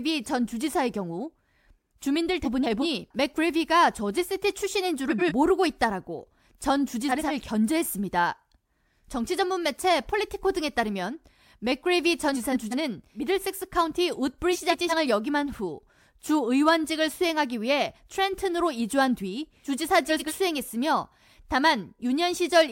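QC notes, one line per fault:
2.44–2.86 s, 5.09–5.32 s, 7.09–7.31 s, 12.34–12.75 s, 14.53–14.93 s, 20.09–20.32 s: frames out of order. Two adjacent blocks, about 186 ms each in the first, fourth and fifth cases and 93 ms each in the others, play swapped. This gives a garbled flutter. Unlike a dropout or a repeat, no time is lost and nothing recurs.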